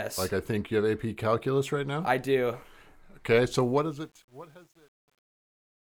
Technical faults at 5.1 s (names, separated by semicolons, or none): truncation distortion on a fade